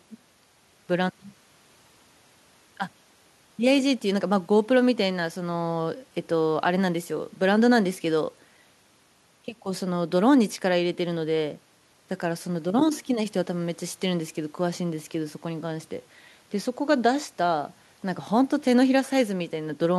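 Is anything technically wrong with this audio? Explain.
No, nothing is technically wrong with this audio.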